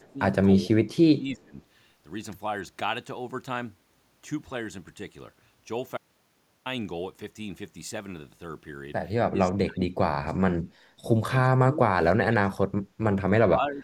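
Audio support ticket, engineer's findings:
Echo leak, 0.0 to 0.1 s: very faint delayed copy of the speech, trailing by about 291 ms. Likely cause: far-end echo canceller on a loudspeaker endpoint not fully removing its mic pickup, residual returned down the line.

Speech suppressed in double talk, at 0.0 to 0.19 s, 0.66 to 1.58 s, 9.29 to 9.96 s, 10.2 to 10.79 s, 11.49 to 12.72 s and 13.39 to 13.83 s: speech dips or cuts out in pieces, roughly 10 to 30 dB down, deepest near 12 s. Likely cause: echo canceller unable to separate talker from loudspeaker echo during overlap, attenuating both.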